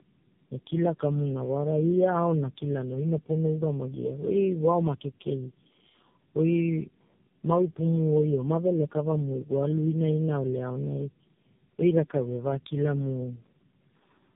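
Throughout, tandem speech coding, with four speech coders stacking their losses, makes the speech rough, muffled and warbly; the spectrogram shows smeared harmonics capped at 3.7 kHz.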